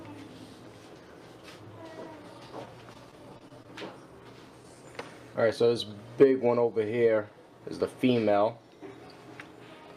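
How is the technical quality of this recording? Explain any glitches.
The recording has one clear glitch: a burst of repeated packet loss, which gives the sound a robotic edge from 2.65 to 3.68 s. Across that second, about half a dozen brief holes open, none longer than about 19 ms. Each is patched by stretching the preceding sound, so roughly 95 ms is filled in while about 80 ms is simply gone. The result is choppy, with pieces missing. Unlike a single dropout, the holes recur in quick succession, so the disturbance is a stuttering texture rather than one clean gap.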